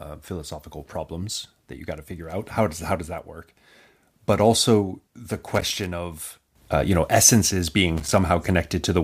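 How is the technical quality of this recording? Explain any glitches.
The recording has two glitches, both loose connector crackle. The first runs from 5.54 to 5.86 s, between "also the" and "of uh you know". The second runs from 7.97 to 8.18 s, after "uh you know essences". A worn contact briefly breaks the signal path, chopping the audio into an irregular, scratchy crackle.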